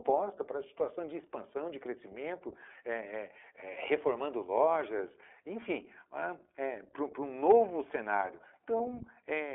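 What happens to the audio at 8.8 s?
A packet carrying iLBC audio went missing, so lost iLBC frames leave a gap from 8.78 to 8.81 s. The gap lasts 20 ms, which fits a single lost 20 ms frame. With nothing to decode, the decoder repeats the last pitch cycle blended with noise. The result is a brief held, slightly buzzy sound. Because each iLBC frame decodes on its own, the speech returns cleanly right after.

That moment also sits inside the iLBC codec path that runs through the whole clip, at a rate that fits its 15.2 kbps mode. The excitation of each 20 ms frame is coded independently, and the line passes only about 250 Hz to 3.4 kHz. The speech therefore sounds thin and narrowband, with plainly audible roughness and a somewhat synthetic edge around the concealed gap.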